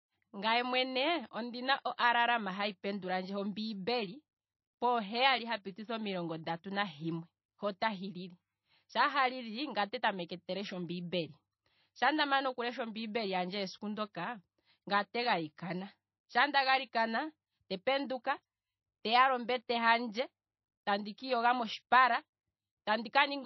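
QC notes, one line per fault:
Throughout, MP3 compression: the speech sounds watery and swirly, with a metallic chirp on s sounds and smeared consonant onsets, and nothing is heard above 5.8 kHz, so the top is dull and closed in. The damage is plainly audible and the likely cause is a low-bitrate MP3 encode, around 25 kbps, where the encoder runs short of bits, chops the treble at a fixed cut-off and lets weak frequency lines flicker on and off between frames.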